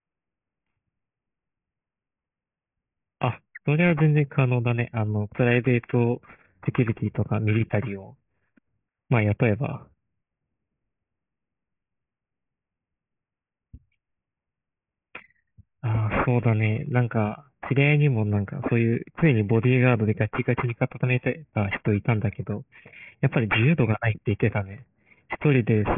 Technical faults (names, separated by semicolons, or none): aliasing